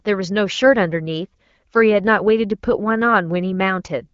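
No technical faults can be heard in this speech recording. It has passed through the AMR wideband (HD Voice) codec at 12.65 kbit/s, which leaves only light coding traces on the sound.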